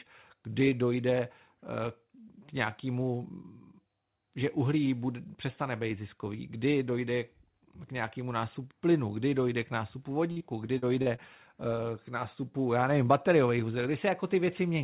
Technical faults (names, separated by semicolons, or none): repeated packet loss (robotic sound)